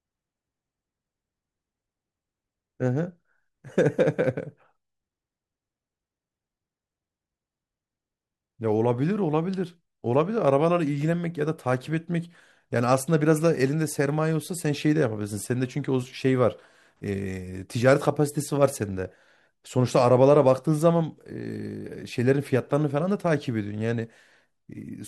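Nothing in the speech stood out as a technical problem on listening.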